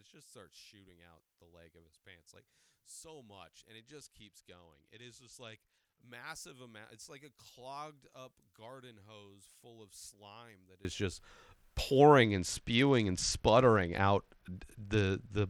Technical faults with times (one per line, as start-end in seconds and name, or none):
0.00-10.85 one channel inverted
3.78-6.01 Bluetooth SBC bit pool drop
12.24-15.49 Bluetooth SBC bit pool drop